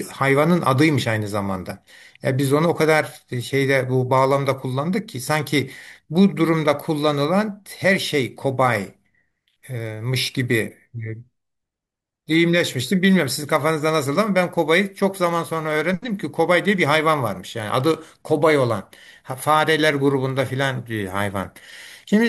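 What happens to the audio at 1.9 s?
Nothing goes wrong at 1.9 s; the speech carries straight through that moment without any audible fault.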